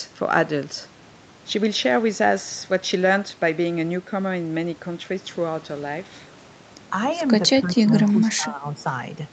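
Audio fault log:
7.86–7.90 s, 8.13–8.17 s, 8.35–8.76 s: speech suppressed in double talk. The echo canceller likely mistook overlapping talk for echo, dipping the speech by roughly 5 to 10 dB.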